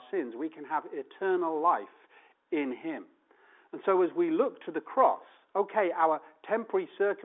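No technical faults can be heard in this speech, which carries the narrow band of an ordinary telephone line with nothing above about 3.8 kHz.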